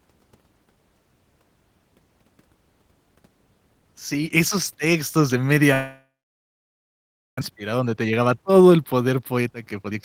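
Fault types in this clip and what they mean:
Long network dropout: from 5.73 s, just after "esos textos de", the speech breaks off. A fading continuation of the last sound gives way to about 1.3 s of silence until 7.43 s. This is likely a network outage, and about one second of speech is lost, never played.
Jitter buffer speed-up: from 7.51 s to 9.95 s the speech runs about 14% fast at unchanged pitch and sounds hurried. The receiver is trimming tiny pitch-period slices, roughly 0.4 s in all, to shed the delay that built up after the gap.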